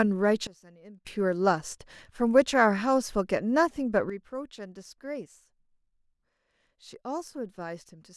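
Sudden gain jumps occur at 0.47 s, where the speech and its background noise drop together by about 21 dB until 1.07 s, and at 4.10 s, where both fall by about 11 dB and stay down to the end, likely from digital gain settings applied without a ramp.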